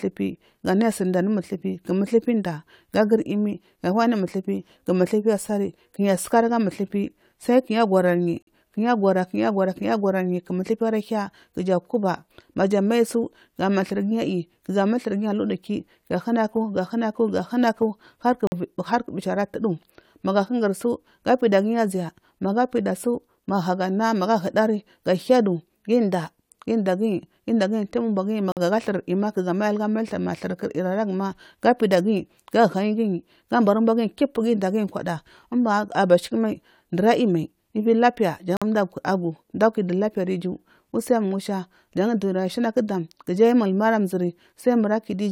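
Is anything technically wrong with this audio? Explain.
Yes, there is a gap between chunks. The speech was delivered in 10-second chunks, and each join received about 48 ms of silence, likely from padding or a late start. Nothing is lost, but short holes cut the speech at 8.42 s, 18.47 s (just before "u bichi ara tudu"), 28.52 s and 38.57 s (right after "mad ivi lapiya").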